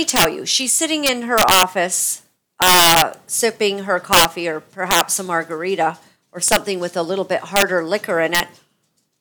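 A speech clip broken by violent, sharp cracks on loud syllables at 0.10–0.25 s (just before "you she's sitting"), 1.06–1.63 s, 2.62–3.02 s, 4.13–4.25 s, 4.91–5.01 s (before "a margarita or"), 6.48–6.56 s, 7.56–7.62 s (after "with a little bit") and 8.35–8.40 s. This is integer overflow: peaks driven about 3 to 7 dB past the integer limit wrap to the opposite sign instead of being held.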